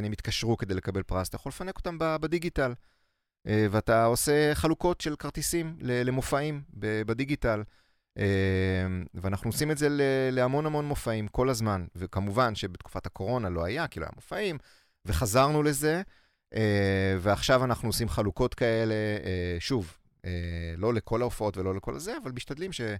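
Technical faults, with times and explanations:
Listening through this speech recording, nothing stood out as a technical problem at any point.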